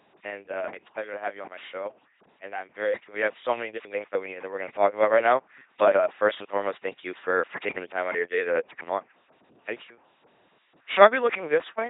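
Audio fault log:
throughout LPC-10 vocoder: speech becomes heavy robotic buzz or hiss with nothing above 3.8 kHz. Unlike simple band-limiting, the voice source itself is replaced, which fits a 2.4 kbit/s coder.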